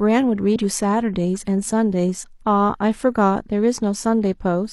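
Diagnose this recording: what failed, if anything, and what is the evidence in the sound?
The fault sits at the codec stage: damaged data in a compressed stream. Between 0.51 and 0.56 s the speech is interrupted by a brief glitch of about 50 ms. Corrupted bytes in the encoded frames there led the decoder to misinterpret or discard them and lose frame sync until it locked onto a valid header again. On a spectrogram this appears as a narrow vertical break in the speech harmonics. The waveform shows an abrupt discontinuity at that spot.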